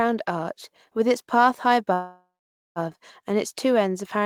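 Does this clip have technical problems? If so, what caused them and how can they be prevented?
Yes: a call audio freeze from 1.93 to 2.79 s, after "with its path high", likely from delayed packets emptying the jitter buffer; the sound stretches, then falls silent for about 490 ms before resuming intact. A steadier network path or a deeper adaptive jitter buffer would prevent it.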